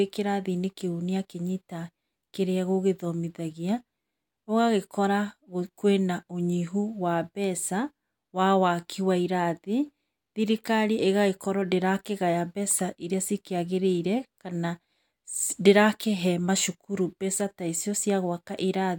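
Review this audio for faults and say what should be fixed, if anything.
No faults; nothing needs fixing.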